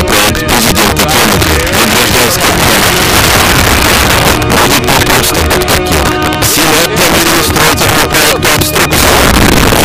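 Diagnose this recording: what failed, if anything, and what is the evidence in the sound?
Integer overflow in a fixed-point gain or sample-format stage: about 4 dB of overdrive wraps peaks to the opposite sign, causing violent cracks on roughly 7 percent of samples throughout.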